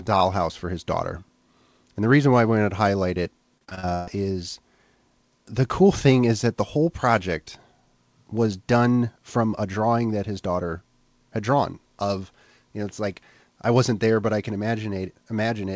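A speech clip with one stretch of repeated packet loss, giving a robotic sound. It runs from 3.58 to 4.09 s, right after "wanted to highlight it". About six gaps break this half second. The longest lasts around 130 ms. Each gap is filled by stretching the last received sound, so roughly half the span is concealment. That makes it choppy. Nothing is heard above 8 kHz, which fits a G.722 call path.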